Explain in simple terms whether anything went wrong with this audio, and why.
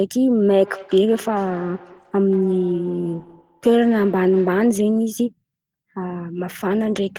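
Two devices in the same room were on the call, so one played back what the other's microphone sent, and that microphone picked it up again. This feedback echo between two devices makes the speech come back about every fifth of a second, quieter and thinner, from 0.48 to 4.8 s.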